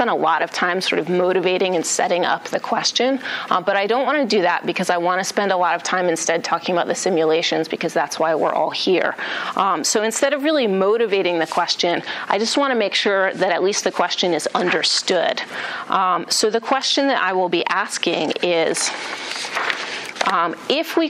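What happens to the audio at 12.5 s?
Nothing goes wrong at 12.5 s; the audio plays through that point intact, with no dropout, click or other fault.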